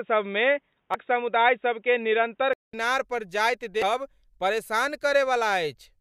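From the start to 2.73 s the speech sounds dull and boxy, likely because the input switched to a poorer device. A spectrogram shows nothing above 3.8 kHz and a faint new noise floor well below the speech. At the switch back there is a gap of about 200 ms, visible as a flat line in the waveform, and then the level changes by about 5 dB along with fuller treble.

From 0.91 to 0.95 s, and again from 3.79 to 3.83 s, damaged data in the compressed stream causes a short glitch. The decoder misreads corrupted frames and skips ahead to resynchronise. Each event shows as a brief disturbance on the spectrogram and a discontinuity in the waveform.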